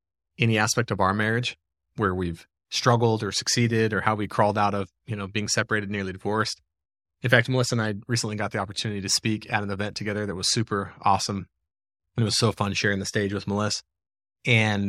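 Nothing technically wrong can be heard in the speech recording, as the signal stays steady throughout with no audible faults.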